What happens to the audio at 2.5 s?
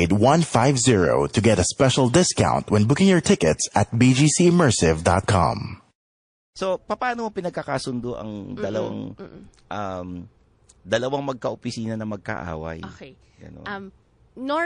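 At 2.5 s the speech carries the same damage heard across the whole clip, most likely from MP3 compression at a low bitrate, which fits roughly 40 kbps. Short of bits, the encoder cuts the treble and drops weak frequency lines that flicker between frames, so the sound turns watery and swirly, s sounds chirp metallically, and consonant attacks smear. A plain low-pass filter would dull the sound without this shifting, bubbling texture.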